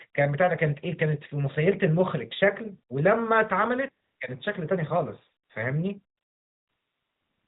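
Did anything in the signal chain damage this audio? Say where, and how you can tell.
Yes. AMR comfort noise at 4.04–4.20 s, 5.44–5.50 s and from 6.18 s to the end, at the codec stage: the phone judged these stretches silent and stopped sending speech frames. The receiver then swapped the real background for a smooth, steady synthetic noise that switches abruptly in and out.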